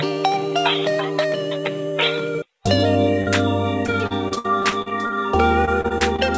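At 3.22 s there's a short concealed packet loss. About 40 ms of audio arrived too late for the decoder, so the receiver stretched the last sound across the hole and then blended back in. You hear a quick smear or wobble until 3.28 s.

From 3.86 s to 5.11 s it turns into repeated packet loss with that robotic sound. Holes of up to 60 ms keep arriving, and each one gets patched by extending what came before, so about a fifth of the stretch is filler. The result is choppy, with bits missing. It happens again from 5.65 s to 6.2 s, with shorter gaps of up to 30 ms, still around a fifth concealed. Underneath all of it the call path cuts off everything above 8 kHz, which fits a wideband G.722 codec.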